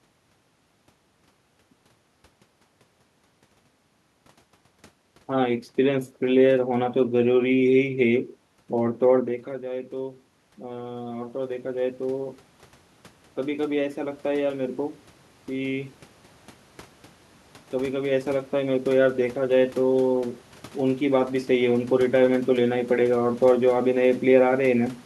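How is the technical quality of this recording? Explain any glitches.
There is one clear glitch: an automatic gain rise from 9.9 to 16.0 s. Just before it, around 9 seconds, the talker moves away and the level at the microphone drops by about 14 dB. The automatic gain control responds by slowly raising its gain by about 10 dB over six seconds, so the voice and the room noise behind it swell up together.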